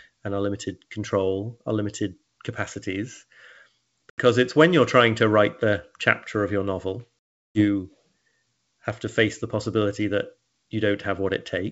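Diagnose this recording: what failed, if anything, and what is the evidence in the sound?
Network packet loss on the ADPCM call: hard silences at 4.10 s (80 ms) and 7.25 s (360 ms), then the desynchronised decoder predictor briefly distorts returning speech.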